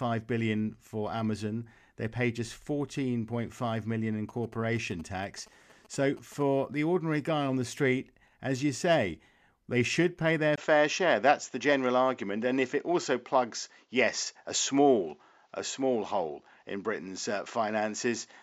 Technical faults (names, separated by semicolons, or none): GSM signalling bursts; input switched to a poorer device